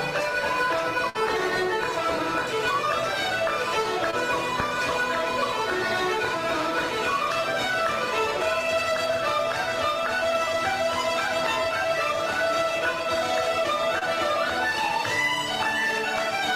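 A burst of packet loss at 1.09 to 1.17 s interrupts the audio: packets arrived too late or not at all, so the receiver stretched the last sound across a 52 ms gap and faded it as the gap went on. Playback then picks up further along, with about 40 ms of the original skipped, so the continuation sits in place of content that never plays. Short concealed packet loss occurs twice, at 4.11 to 4.15 s and at 13.99 to 14.03 s. In each case roughly 20 ms of audio missed the decoder's deadline, and the receiver extrapolated from the preceding sound for 20 ms and 25 ms respectively before blending back into the real signal. The result is a brief smear or wobble rather than a clean cut. A loud pop at 4.60 to 4.62 s is a single sharp transient about 10 dB above the surrounding signal, laid on top of the audio, which continues underneath. It sounds like an abrupt voltage step or pulse entering the chain, shaped and possibly ringing briefly in the circuitry after it, with a plug, switch, static discharge or driver glitch the likely source.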